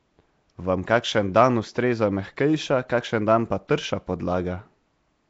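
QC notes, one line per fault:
Throughout, Nellymoser compression: the speech carries a rough, hissy haze around it and a smeared, underwater character, with nothing present above about 7.7 kHz. The likely cause is the Nellymoser Asao codec at a rate that fits about 32 kbps. It codes short blocks at a fixed, low bit budget. Weaker bands get no bits and are replaced with noise, which produces the grainy halo. Coarse block quantisation blurs the transients.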